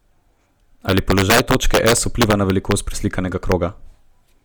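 A speech clip with two faults. The whole clip has a grainy, breathy edge, and there is plainly audible codec damage in the upper band, though content reaches up to 20.1 kHz. The likely cause is Bluetooth LC3 compression at a rate that fits 48 kbps with 10 ms frames. It thins the high spectrum and fills it with noise. Integer overflow produces violent cracks from 0.89 to 2.72 s, where peaks run about 6 dB past the limit. A single crack follows at 3.52 s, about 1 dB over. Each overshoot wraps to the opposite sign instead of being limited, which is far harsher than clipping.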